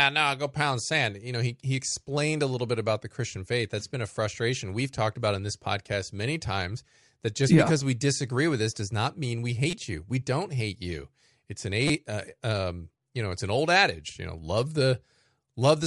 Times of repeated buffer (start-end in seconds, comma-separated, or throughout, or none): 9.71-9.73, 11.88